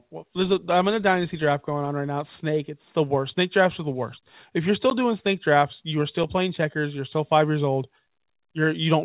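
A single sharp tick cuts through the speech at about 4.90 s: for roughly 11.6 ms the signal drops to dead digital silence and jumps straight back with no fade. It is a block of digital silence, most likely an output buffer that wasn't filled in time, and the length fits a 512-sample buffer. The speech is carried over a call path whose narrowband codec leaves nothing above 4 kHz.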